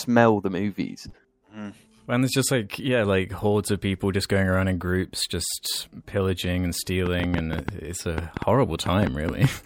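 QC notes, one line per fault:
7.06 to 9.45 s, train of clicks: around fifteen same-shaped pops at roughly 6.3 per second, unevenly spaced and sticking out well above the speech, audible in the gaps too. Likely interference from nearby gear or a faulty connection or power supply.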